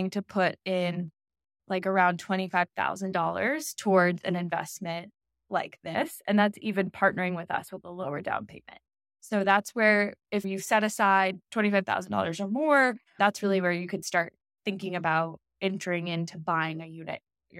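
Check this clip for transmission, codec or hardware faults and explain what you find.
One fault is present. From 5.95 to 8.35 s there is channel delay (comb filtering): one channel lags by a few samples, about 0.07 ms. Summed to mono, the speech takes on fixed notches, with the first cancellation notch near 7 kHz, so it sounds hollow or phasey.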